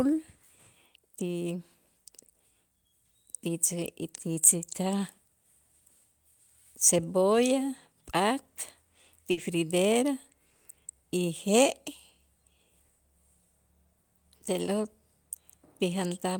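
At 9.31 to 9.39 s there's a burst of packet loss: the receiver stretches and fades the last sound for about 60 ms, then skips ahead.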